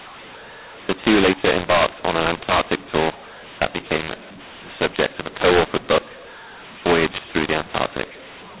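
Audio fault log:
Throughout: mu-law and A-law mixed up. The telephone audio was encoded with A-law but decoded as mu-law, so each 8-bit code maps to the wrong level. The speech comes out harsh and distorted, and the quietest samples are lifted above silence, so pauses fill with noise.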